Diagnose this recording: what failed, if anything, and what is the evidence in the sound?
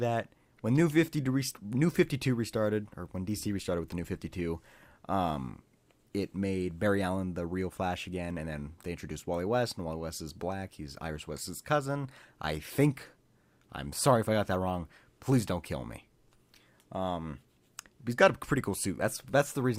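Nothing in this recording points to a failure at any stage of the chain. No audible event calls for a diagnosis.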